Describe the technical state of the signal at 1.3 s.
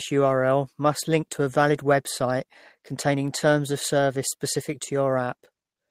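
At 1.3 s the speech signal is intact, with no audible fault at that moment.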